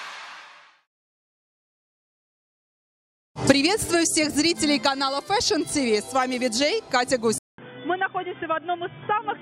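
At 7.38 s a 200 ms flat gap in the waveform gives way to duller, slightly quieter sound, blank above 3.5 kHz on a spectrogram: likely the input switched to a poorer device.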